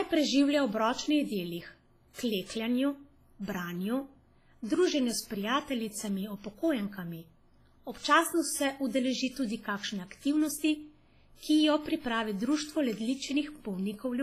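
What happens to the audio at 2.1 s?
A short pre-echo runs from 2.13 to 2.18 s: about 51 ms of hiss arrives before a sharp attack and softens it. Quantisation noise spread across the whole transform block leaks into the quiet gap, so unlike reverb the smear comes before the onset rather than after it. The cause is likely heavy WMA compression throughout, with washy, ringing hiss, nothing above 15.2 kHz, and a sound that fits a bitrate near 24 kbps.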